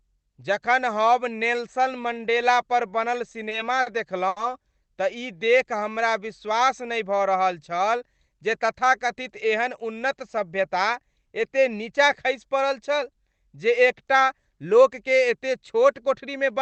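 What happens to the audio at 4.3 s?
A packet arrived late at 4.28 s, the jitter buffer ran dry, and the receiver stretched the last bit of sound for about 80 ms until the packet showed up at 4.39 s. This is a short stall from a late packet. Nothing is lost: playback resumes exactly where it left off, now running about 80 ms later than before. What you hear is one sound held a touch too long, with a faint buzzy or dipping quality across the stretch.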